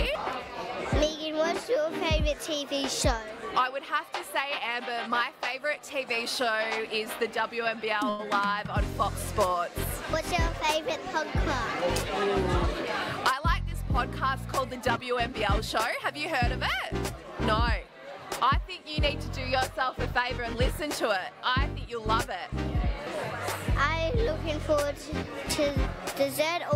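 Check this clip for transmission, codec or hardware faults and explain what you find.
Two transmission faults show up, both from the network jitter buffer.

From 8.09 to 8.21 s there is a short stall from a late packet. A packet missed its playout time and the jitter buffer ran dry, so the receiver padded the gap by extending the last stretch of sound for about 96 ms until the packet turned up, then resumed where it left off. Nothing is skipped, but that moment is held unnaturally long with a faint buzzy or sagging quality, and everything afterwards plays about 96 ms later than before.

From 15.78 to 16.42 s comes a jitter buffer speed-up. With more audio queued than the buffer's target, the receiver trimmed away short pitch-period-sized slices over and over to drain the excess, removing around 40 ms in total. Playback runs at about 104% speed while the pitch stays put, just under the rate at which it would clearly sound hurried.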